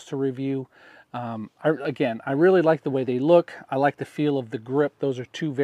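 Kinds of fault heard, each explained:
No audible faults detected.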